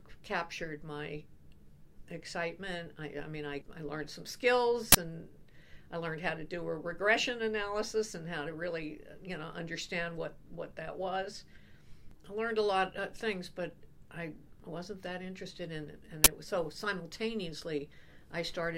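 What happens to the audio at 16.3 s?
At about 16.24 to 16.27 s there is an uninitialised buffer fault: a block of roughly 23 ms was sent to the output before any audio had been written into it, so whatever data was left in that memory got played as samples. It is heard as a short, loud burst of harsh digital noise. The length of the burst fits a 1024-sample buffer.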